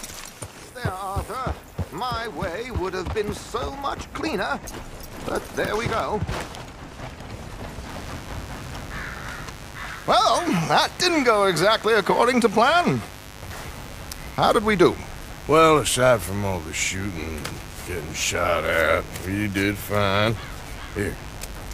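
From 7.89 s to the end, a steady, raspy mains buzz sits about 20 dB below the sound. Switching spikes from a dimmer, rectifier or missing shield add 50 Hz harmonics.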